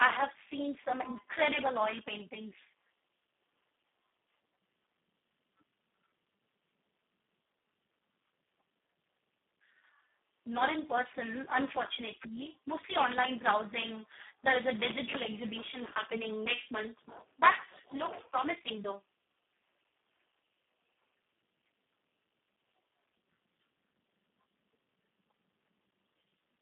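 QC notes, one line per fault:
Throughout, Speex codec: the speech sounds hoarse and noisy from start to finish, confined to a narrow telephone band of roughly 200 Hz to 3.4 kHz and nothing above 3.8 kHz. The CELP coder has very few bits left for the excitation signal, so the natural voice source is replaced by a crude approximation. The damage is heavy, which fits Speex running at about 4 kbps.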